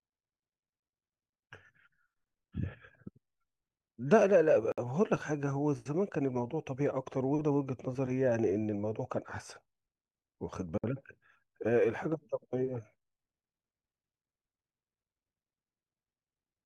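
At 4.72 s and again at 10.78 s the speech drops out for about 58 ms, six seconds apart: a gap at a join of encoded pieces, where each separately encoded segment kept its start-up silence and end padding. On a spectrogram each shows as a blank vertical strip across all frequencies, and the waveform goes flat between smeared edges.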